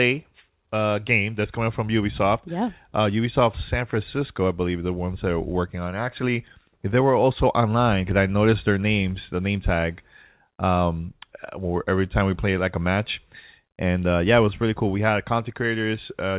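No technical faults are audible, and the audio comes through a call path whose content stops at about 4 kHz, which fits a narrowband G.711 mu-law codec at 64 kbps.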